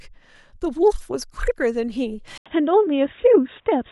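At 2.38 s the input likely switched to a poorer device: after an 80 ms gap, the speech turns boxy, losing everything above 3.8 kHz.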